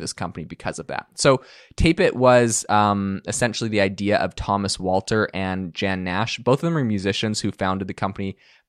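No technical faults can be heard at any point in this speech recording.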